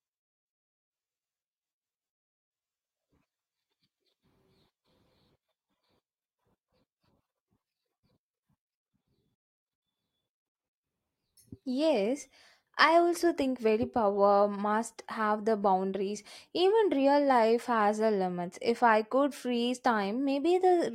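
No audible technical faults present.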